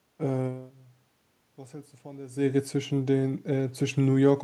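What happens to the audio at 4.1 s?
Nothing goes wrong at 4.1 s: the speech continues intact through that moment, with only the ordinary background noise of the room beneath it.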